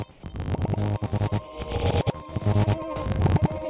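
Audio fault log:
throughout: filter restarted on every block. Each block starts from zero state, leaving a transient that ticks at 50 Hz (which suggests 20 ms blocks). The waveform shows periodic clicks and the spectrogram shows vertical stripes.
0.11–0.23 s: comfort noise in place of the background. For 120 ms the background becomes steady featureless hiss, about 4 dB quieter, likely from discontinuous transmission. The spectrogram shows a smooth band there.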